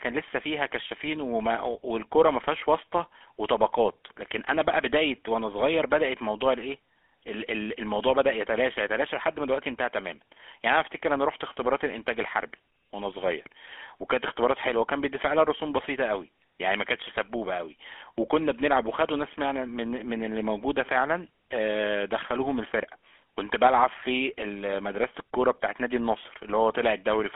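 GSM full-rate codec coding runs through the whole speech clip, from start to finish. The codec rebuilds the voice from a vocal-tract model driven by a coarse, regularly spaced pulse excitation, which leaves a plainly audible buzzy, gravelly roughness on the voice, consistent with the 13 kbps full-rate mode. The sound sits inside a telephone band of about 200 Hz to 3.4 kHz, so the lowest body and all of the upper brightness are gone.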